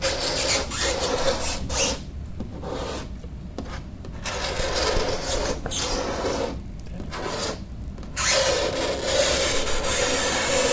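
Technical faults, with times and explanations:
5.64–10.73 s: resampler restarted on every block. Each 20 ms block was converted from 48 to 16 kHz separately, leaving edge errors heard as a 50 Hz buzz. Unlike hum, it stops in silence.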